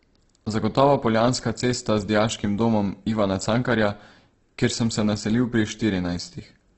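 Speech with heavy Opus compression throughout: a grainy, rough texture and nothing above 8.2 kHz, likely from a music-mode encode at around 12 kbps.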